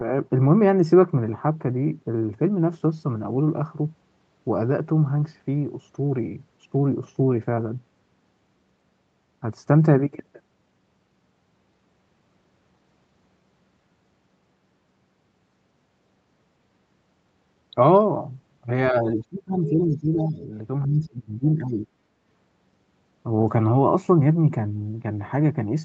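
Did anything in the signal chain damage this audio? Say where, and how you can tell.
Yes. Between 18.91 and 20.51 s and again from 20.85 to 21.88 s, the speech drops by about 20 dB. This likely comes from call processing, with speech suppressed in double talk by the echo canceller. On a spectrogram, energy thins across the band, which already tops out at 8 kHz. The waveform envelope collapses in both stretches.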